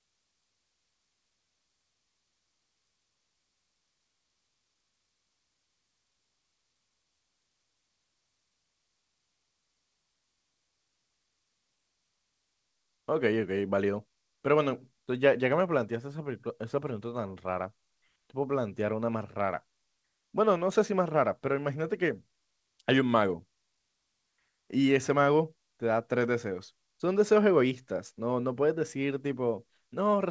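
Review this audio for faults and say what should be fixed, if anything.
Nothing stood out on listening that needs fixing; the speech comes across as expected for a call path whose sound stops at about 8 kHz.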